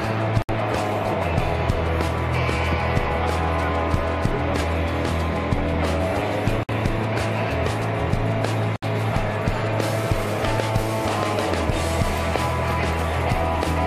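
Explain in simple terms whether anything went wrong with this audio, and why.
Short silences cut into continuous sound at 0.42, 6.63 and 8.76 s, each about 60 to 70 ms long. This is a gap at a join of encoded pieces: separately encoded sections were joined without trimming their built-in start silence. Unlike a dropout, the sound then resumes exactly where it stopped.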